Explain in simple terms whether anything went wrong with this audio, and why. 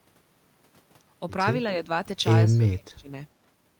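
The speech dips slightly from 1.63 to 1.89 s, then drops much deeper from 2.44 to 3.17 s, likely speech suppressed in double talk by an echo canceller.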